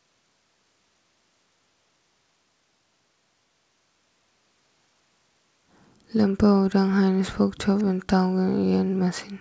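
An echo canceller likely failed to separate the near talker from loudspeaker echo during double talk, causing speech suppressed in double talk in this speech recording: from 6.61 to 8.01 s the voice is pushed down by as much as about 40 dB.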